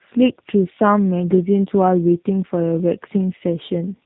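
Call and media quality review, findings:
Rough, muffled, warbly speech throughout; nothing above 3.8 kHz. Tandem speech coding: AMR-NB 10.2 kbit/s, decoded to G.711 A-law, re-encoded to G.729A 8 kbit/s. Two speech codecs in series, second coding already-degraded output, compounding distortion.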